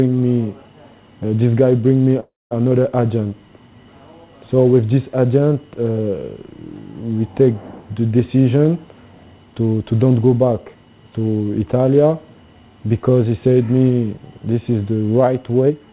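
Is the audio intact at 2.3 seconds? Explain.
No. From 2.2 to 2.53 s the sound stalls: the last moment is drawn out as a fading buzz that sinks into about 200 ms of silence before the audio resumes where it stopped. This is a call audio freeze, likely from packets held up in transit so the jitter buffer ran dry and the receiver filled roughly 0.31 s on its own. Nothing is lost, but everything after arrives about 0.31 s later.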